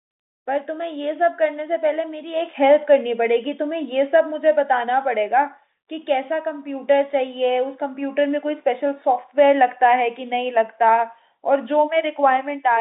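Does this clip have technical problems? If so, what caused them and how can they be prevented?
No, nothing in this speech stood out as a technical problem on listening, so there is nothing here that needs preventing.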